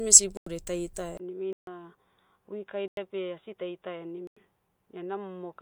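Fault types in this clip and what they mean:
Block of digital silence: the output drops straight to silence and back with no fade, leaving a short hole. Gaps at 0.37, 2.88 and 4.27 s last 93 ms each, which fits a 4096-sample buffer; the 1.53 s gap lasts 143 ms.
Input switched to a poorer device: at 1.17 s, after a 20 ms silence, the sound turns dull until the end, with nothing above 3.8 kHz, level about 10 dB lower and new background noise roughly 50 dB down, likely from a narrower-band input taking over.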